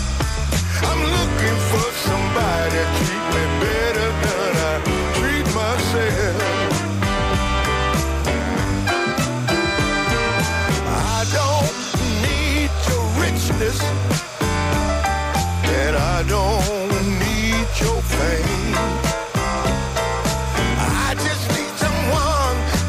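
Timecode bleed runs throughout the clip: a linear timecode signal at 30 frames per second has leaked in from an adjacent track or cable. Its square wave flips between tones near 1 and 2 kHz, giving a constant chirping warble roughly 20 dB beneath the sound.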